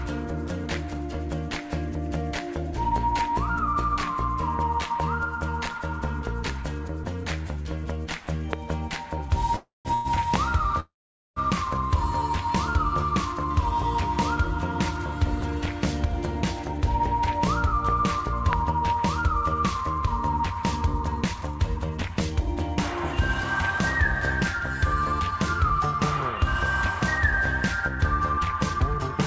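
A loud pop lands at 5.00 s and again at 8.53 s, each a single sharp click peaking about 20 dB above the sound, which carries on beneath it. This is likely a voltage step or driver glitch. On a waveform each shows as a lone tall spike, and on a spectrogram as a thin vertical line through every frequency.

A call audio freeze follows from 9.56 to 9.88 s and from 9.94 to 10.08 s. The last sound stretches into a fading buzz, silent for roughly the final 160 ms of the first gap, and then resumes where it stopped. That is likely late packets draining the jitter buffer. The spectrogram shows smeared horizontal bands fading to blank.

Another pop hits at 10.36 s. A longer freeze runs from 10.80 to 11.39 s, going silent for about 460 ms.

Jitter buffer speed-up comes in stretches: 16.04–17.40 s at 103%, 18.70–20.07 s at 104%, 20.76–23.13 s at 105%, 24.53–26.32 s at 103%, and 26.99–29.16 s at 104%. 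Tiny pitch-period slices are cut away to shrink a backlog, so the sound hurries without changing pitch. The largest stretch loses around 150 ms. On a waveform, the events arrive a little early and closer together, and the spectrogram looks slightly compressed in time.

A final pop falls at 18.53 s. Throughout, nothing appears above 8 kHz, which fits G.722 at 64 kbps on the call path.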